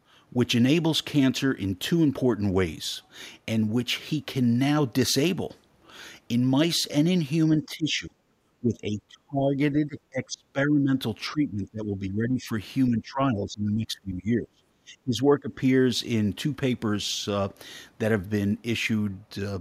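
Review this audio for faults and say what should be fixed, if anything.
The speech gets pushed down at 7.59–8.12 s, 8.59–10.9 s, 11.31–12.49 s and 12.89–15.53 s, by around 15 dB in the shorter dips and up to 25 dB in the longer ones. That's likely speech suppressed in double talk: with both sides talking, the echo canceller couldn't tell this talker from loudspeaker echo and clamped down. Tuning the canceller's double-talk detection so it holds back suppression when near-end speech is present would fix it.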